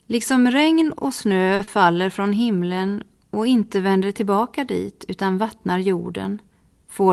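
At 1.55 to 1.62 s, right after "regn och snö", a packet arrived late and the jitter buffer ran dry. The receiver stretched the last sound for about 40 ms, then resumed exactly where it left off. This short stall from a late packet loses nothing but leaves a held moment with a faint buzz or dip, and everything after it runs about 40 ms later.

Immediately after, at 1.63 to 1.70 s, before "från himlen och inte", a packet never reached the Opus decoder in time. Concealment invented roughly 40 ms by continuing the preceding sound, then blended back into the real stream. This short concealed packet loss is heard as a brief smear or wobble where that 40 ms of real audio is gone.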